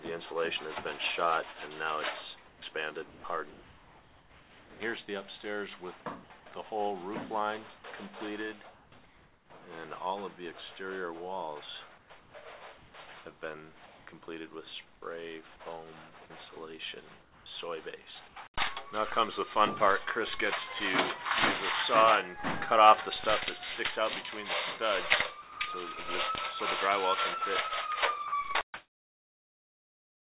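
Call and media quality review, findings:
Sound chopped by the voice detector, 2.48–4.80 s. Choppy sound. About 1.6 s of the span is swapped for brief fill and comfort noise. Likely cause: the sender's voice detector toggling send/no-send several times, with the receiver filling each gap. Quiet edges of the sound were judged background. Audio is band-limited above 4 kHz, which fits a G.711 mu-law call path at 64 kbps.

Comfort noise in place of the background, 8.74–9.50 s, 11.98–14.06 s, 16.26–18.36 s and 28.28–30.30 s. The real background turns into steady, featureless noise. About 0.6 s is replaced in each of the first two spans, about 0.4 s in the third and about 1.6 s at the end. Likely cause: discontinuous transmission during pauses, with the receiver synthesising noise shaped like the background.

Sound dropped by the voice detector, at 16.26–16.30 s, 25.42–25.60 s and 28.28–28.32 s. 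Sound cuts to steady noise, then returns. The losses are short: about 20 ms, 170 ms and 40 ms. Likely cause: the detector mistook low-level sound for background and stopped sending, with comfort noise filling in. The first and last drops open the comfort-noise spans that follow.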